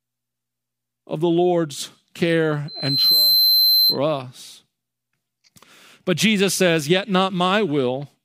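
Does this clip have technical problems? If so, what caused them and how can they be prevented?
Yes. The microphone picked up the loudspeaker it was feeding, and the loop gain passed one at 4.1 kHz, causing loudspeaker feedback squeal from 2.68 to 3.99 s: a pure tone that swells over about half a second until it sits somewhat louder than the speech. Lowering the loudspeaker gain, moving the microphone away from or behind the loudspeaker, or notching 4.1 kHz would keep the loop gain below one.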